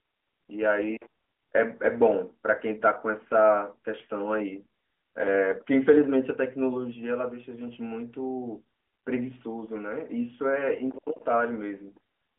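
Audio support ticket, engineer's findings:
Findings: no faults found in this speech audio, which comes through an AMR narrowband mobile path with nothing above about 3.6 kHz.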